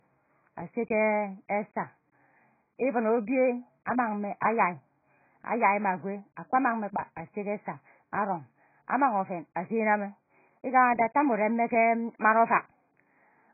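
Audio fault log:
Throughout: low-bitrate audio saved at a high bitrate. The speech has nothing above 2.5 kHz, so it sounds muffled and dull, with the artefacts of the earlier encoding still present. This likely comes from an earlier encode at a very low bitrate, around 12 kbit/s AAC, that was later saved again as MP3 at a generous rate like 256 kbit/s. The second encode adds almost nothing and cannot restore the top band or the detail the first one discarded.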